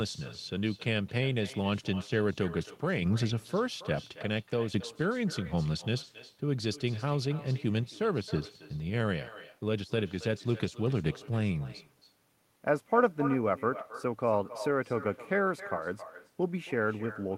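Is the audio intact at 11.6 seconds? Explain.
No. At 11.6 seconds there is echo with no canceller, as throughout the clip. The far end's loudspeaker feeds its microphone, and nothing removes it. Each sound returns roughly a third of a second later, about 17 dB quieter and thinner.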